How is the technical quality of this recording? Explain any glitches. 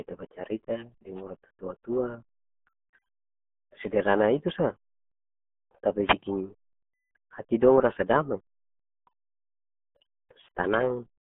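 Technical quality is poor: the whole recording passes through a very low-rate speech codec, and one brief radio dropout interrupts it.

Throughout, the RealAudio 14.4 codec leaves the speech muffled and gargly. Nothing survives above about 3.7 kHz, and the low end thins out below roughly 150 Hz, a band that fits an 8 kbit/s dial-up codec squeezing its data into a telephone-width channel. Unlike plain telephone band-limiting, the heavy coding damage makes the speech gargly rather than just dulling it.

At 6.05 to 6.15 s there is a wireless microphone noise hit, lasting about 0.1 s. The radio link briefly faded as reflected signals cancelled, so the receiver's hiss surged up. It is heard as a short swish of noise, not a clean gap like a packet dropout, and its noisy texture sets it apart from a simple digital click.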